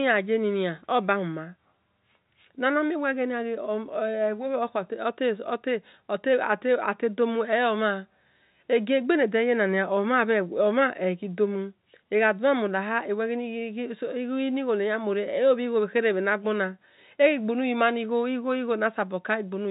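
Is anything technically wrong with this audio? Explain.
No, nothing in this speech recording stood out as a technical problem on listening.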